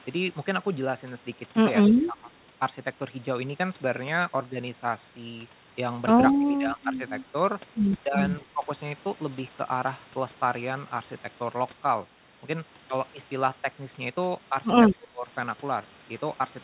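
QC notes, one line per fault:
1.91 to 15.3 s, speech suppressed in double talk: the speech dips in five places, at 1.91 to 2.33 s (about 15 dB), 6.39 to 7.0 s (about 10 dB), 8.01 to 8.18 s (about 10 dB), 8.41 to 8.64 s (about 5 dB) and 14.95 to 15.3 s (about 25 dB). The likely cause is an echo canceller that could not tell this talker from the far-end echo during overlapping talk and attenuated everything. The 4 kHz ceiling of the narrowband call codec applies throughout.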